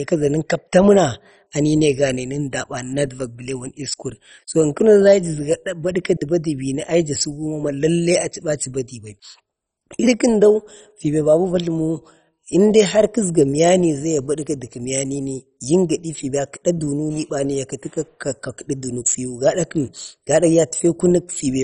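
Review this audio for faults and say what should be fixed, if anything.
The whole clip, start to finish, sounds dull and gurgly, with a granular grit clinging to the speech and nothing at all above 10.4 kHz. That's the signature of MP2 compression at a very low bitrate, likely somewhere around 32 kbps. Layer II splits the signal into 32 sub-bands and rations bits among them, so when the budget is this tight, the top bands get shut off entirely, bands flicker on and off, and the ones left are coarsely quantised. To avoid it, re-export from the original source at a much higher bitrate or in a modern codec, and don't pass the audio through low-rate MP2 at any stage.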